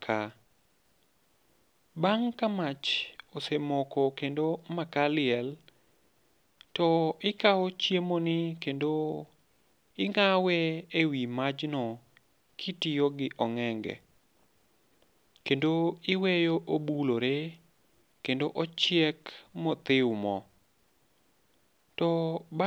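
A speech recording with nothing technically wrong with it.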